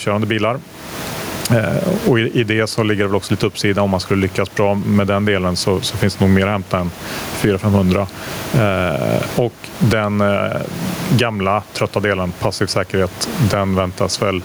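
Gain pumping runs through the whole clip, a gain swing of around 20 dB, with the room noise sitting about 28 dB below the speech. The likely cause is input gain set far too high, with a fast limiter clamping each peak.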